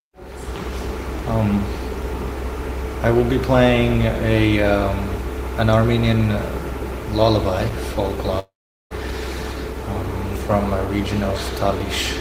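From 8.39 to 8.93 s the sound cuts out, likely a long network dropout: the last fragment stretches into a fading buzz, then 0.41 s of near silence, and 0.52 s is lost. A spectrogram shows smeared horizontal bands fading to a dark gap, and the waveform goes flat.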